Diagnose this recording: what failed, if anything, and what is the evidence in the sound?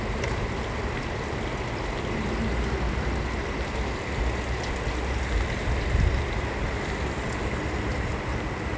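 Sample-rate conversion stage: resampler restarted on every block. A 50 Hz buzz runs throughout but only with sound present, unlike mains hum. Each 20 ms block's edges, converted independently from 24 kHz to 16 kHz, carry errors.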